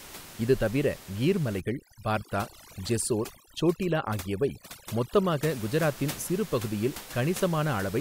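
From 1.60 to 5.49 s, after "இது தவிர கீர்" and until "குஜராத்தின் சிறு பகுதியில்", overdone noise removal gates bands near the noise floor, so the room noise, about 16 dB below speech, collapses into twinkling specks. A spectrogram shows scattered isolated pixels and ragged, hollowed harmonics.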